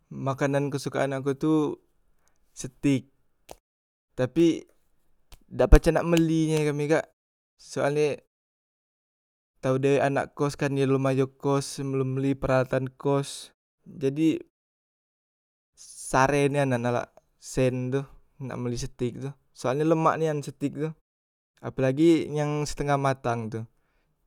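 Speech clip, no technical faults.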